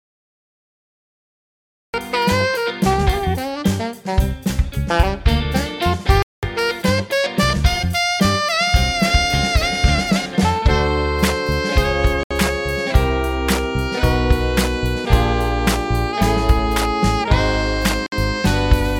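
Nothing plays until 1.94 s, and then the sound arrives already mid-flow. That's a cut-off start: capture began late, so there's digital silence and then an abrupt entry with no natural attack or fade-in, just sound switching on partway through.

Later come three short dropouts to silence, each picking up again: one at 6.23 s lasting about 204 ms, one at 12.23 s for about 72 ms, and one at 18.06 s for about 58 ms. This is likely a Bluetooth stall, where interference delayed packets, the headphone buffer emptied, and playback paused until resent data caught up.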